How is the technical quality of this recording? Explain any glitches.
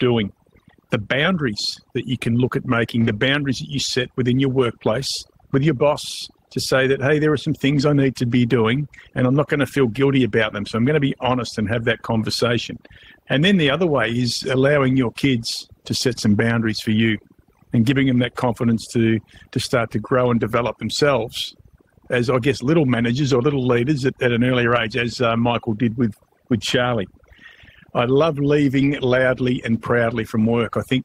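The recording has two clear problems: heavy-handed noise suppression across the whole clip, and four short rough patches where lost audio was patched from backup data.

Overdone noise removal runs through all of the speech. The suppressor cuts individual frequency bands hard whenever they sit near its noise estimate, so the background falls to near silence scattered with twinkling specks, and the quieter parts of the voice are stripped away with it. Low-bitrate coding can also sound thin, but the specks come and go with the gating of each band, which points to suppression.

Lost packet rebuilt from error correction occurs four times. At about 1.53 to 1.55 s, just before "that you can look", a 20 ms stretch turns rough and noisy. At 2.95 to 3.09 s the roughness lasts 80 ms, which fits four separate lost packets. At about 4.91 to 4.93 s, between "you set within your" and "with your boss to", there is another 20 ms patch. 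From 28.77 to 29.23 s, right after "I love", the rough sound lasts 240 ms. Each time, the following packet carried a coarse low-bitrate copy, and the decoder played that copy in place of the missing audio. Ordinary packet loss concealment would leave a gap, a fade or a buzzy, repeated sound. Here the speech keeps going with no gap and only briefly turns grainy.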